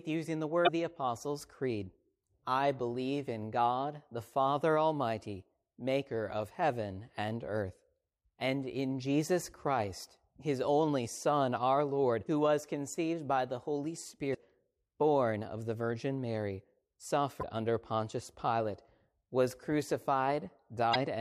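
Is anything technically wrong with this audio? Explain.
Yes. Damaged data in a compressed stream causes brief glitches at 0.64 s (after "using the"), 12.24 s (before "who was conceived by"), 14.31 s, 17.39 s and 20.91 s, each about 40 ms long. Corrupted frames break decoder sync, so it skips ahead to the next valid header.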